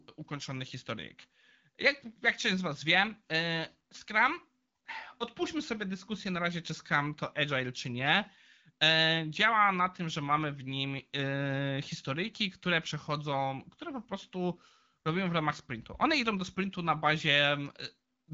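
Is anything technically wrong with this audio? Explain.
No technical faults are audible.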